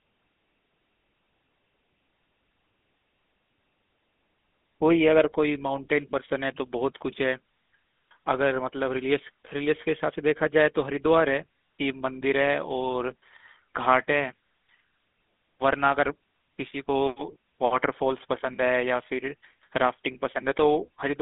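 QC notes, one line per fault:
Throughout, GSM full-rate codec: the speech has a buzzy, gravelly roughness that is plainly audible, and it sits in a narrow telephone band running from roughly 200 Hz up to 3.6 kHz, with nothing bright above. The codec rebuilds the voice from a vocal-tract model excited by a sparse, regularly spaced pulse train, so the fine texture of the original excitation is lost. The harsh, grainy quality fits a 13 kbps GSM full-rate stream.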